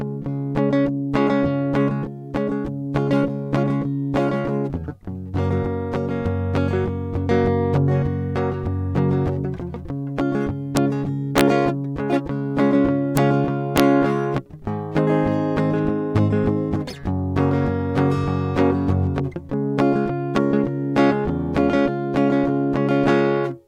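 A music clip with integer overflow: sharp cracks at 10.77 s, 11.38–11.41 s, 13.17 s and 13.78–13.80 s, where loud peaks reach the integer limit or exceed it by about 1 dB. Instead of being clamped, the overshooting samples wrap to the opposite extreme of the range. On a waveform, peaks jump abruptly from one rail to the other. On a spectrogram, each event shows as a bright, full-height vertical stripe.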